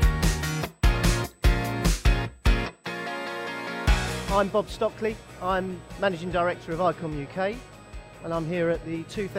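USB whine runs throughout: microframe current leaks in as a fixed 8 kHz tone, strongest at 16 kHz and roughly 30 dB down, seen as flat spectrogram lines.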